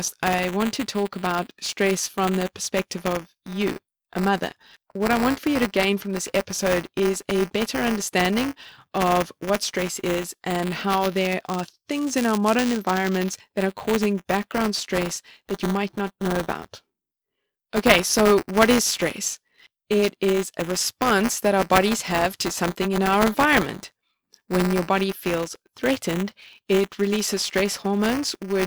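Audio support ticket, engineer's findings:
Buffer tearing throughout speech: 200 Hz robotic buzz, signal-only. Waveform shows hard joins each period; spectrogram, 200 Hz comb. Writer/reader pointers crossing; small slice replays audio about 10 ms old.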